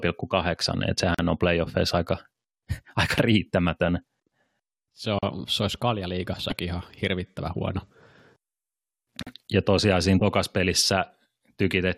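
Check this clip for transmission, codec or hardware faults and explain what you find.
There's one fault in this speech clip, repeating: a gap at a join of encoded pieces. About 40 ms of silence cuts in at 1.14 to 1.19 s, just before "on playoffeissa aika", at 5.19 to 5.23 s, before "se olisi kaljaliigassakin ihan", and at 9.23 to 9.27 s. The 4-second spacing points to separately encoded chunks stitched together untrimmed, each keeping its encoder start delay and end padding. You hear a brief, slightly softened dropout, then the speech picks up where it stopped.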